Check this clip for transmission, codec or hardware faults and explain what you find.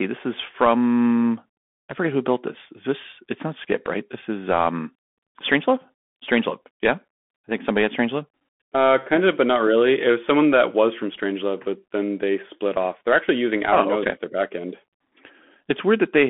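One fault runs through the whole speech clip: Bluetooth CVSD headset codec degradation. The band sits between roughly 200 Hz and 3.5 kHz, with nothing above. CVSD sends a single up-or-down bit per sample and adapts its step size, a scheme that fits a 64 kbit/s stream. Because the step cannot keep pace with fast, loud high-frequency movement, the waveform slopes instead of tracking. The damage is plainly audible: s sounds come out scratchy, louder passages rasp, and a fine granular hiss sits under the speech.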